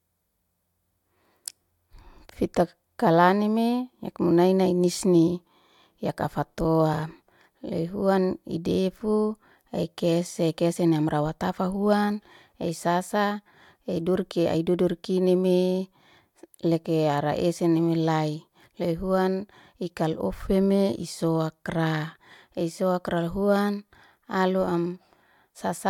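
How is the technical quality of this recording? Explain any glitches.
No glitches to report; the speech recording runs without any audible technical faults.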